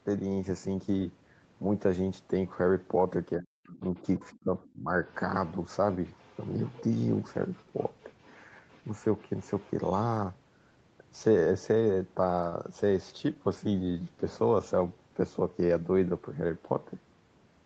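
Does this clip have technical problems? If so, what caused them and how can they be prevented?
Yes. Between 3.36 and 4.89 s there is speech suppressed in double talk: the talker's level drops in pieces, by about 40 dB at the deepest, for roughly 0.7 s in total. The likely cause is an echo canceller that could not tell the near talker from the loudspeaker echo while both sides spoke, so it attenuated everything. On a waveform this shows as sudden notches in the envelope; a spectrogram shows gaps or thinned upper harmonics. Stronger double-talk detection, or a headset instead of an open loudspeaker, prevents this.

The other side's voice is leaking through at 3.73–4.00, 4.31–4.70, 5.08–5.15, 5.47–5.52 and 6.18–10.05 s, about 20 to 40 dB below the talker. This is likely residual loudspeaker echo that the echo canceller left in the microphone signal. On a spectrogram it appears as a faint second set of harmonic stripes, unrelated to the main voice, sometimes broken up. 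Better echo cancellation or lower loudspeaker volume prevents it.

At about 12.49 to 12.54 s there is a short stall from a late packet. The jitter buffer ran empty and held the last sound for 24 ms until the packet arrived, so nothing is missing but one sound lingers unnaturally with a slight buzz or dip. A spectrogram shows a brief flat, smeared column, and the waveform shows a tiny repeated stretch. A larger or adaptive jitter buffer prevents it.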